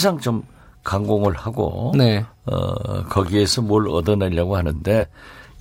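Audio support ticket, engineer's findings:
Compressed frames skipped, 4.99–5.04 s: speech jumps ahead about two 46.4 ms frames. Decoder dropped damaged or missing frames.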